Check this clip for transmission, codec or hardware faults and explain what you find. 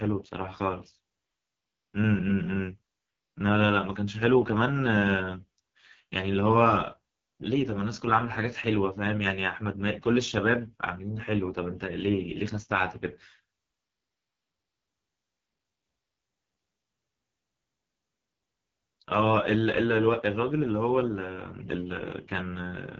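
There's one codec fault across the whole speech clip: AMR wideband (HD Voice) coding, heavily damaged, rough and raspy, nothing above 7.5 kHz. The crude vocal-tract model and noise-filled top band fit the lowest 6.6 kbit/s mode.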